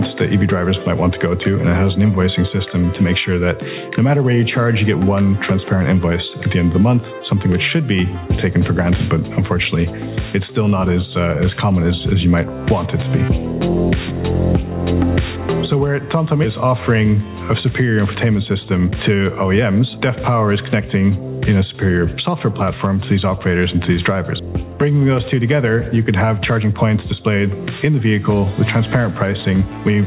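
Across the whole clip the level swings by around 10 dB. Loud and quiet passages sit unnaturally close together, giving a squashed, pumping feel. This is gain pumping, most likely from input gain set far too high and a fast limiter or compressor clamping down on each peak, then releasing in the pauses. It is heard through a narrow call path with nothing above 4 kHz, which fits G.711 mu-law at 64 kbps.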